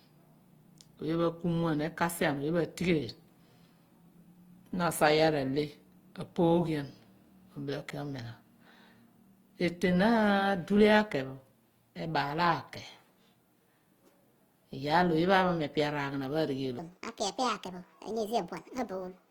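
Throughout the clip, the sound has been squeezed through a low-rate codec, most likely Opus in its music (CELT) mode at a rate that fits about 24 kbps. Opus compression at that budget keeps each band's energy but fills starved bands with folded or noise-like content. The speech still reaches up to 20.2 kHz, yet its tones come across rough and grainy, with a hissy, textured edge on voiced sounds instead of clean harmonics.

From 16.79 s to the end at 19.31 s, right after "epi areghanapho", a section at the wrong speed begins, likely from the audio being played against the wrong clock. It runs 1.53 times too fast, so pitch and tempo rise together by roughly seven semitones. The speech turns abruptly high and hurried, chipmunk-like, and stays that way to the final moment.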